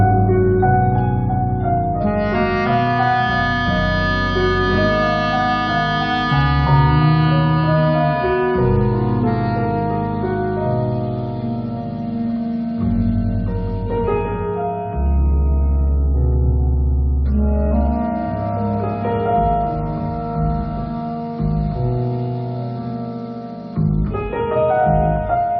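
Nothing technically wrong turns up anywhere in this audio, so there's simply no fault to point to here.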